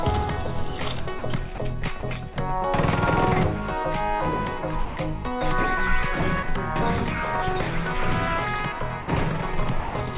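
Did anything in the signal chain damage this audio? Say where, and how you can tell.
Yes. It's in the call processing, and it's likely the voice detector dropping sound. The audio briefly gives way to steady comfort noise at 1.19–1.22, 1.55–1.58, 2.00–2.03, 2.33–2.36, 4.85–4.97, 9.02–9.08 and 9.80–9.95 s, then resumes once the detector retriggers. The band stops at 4 kHz, as a narrowband call codec would.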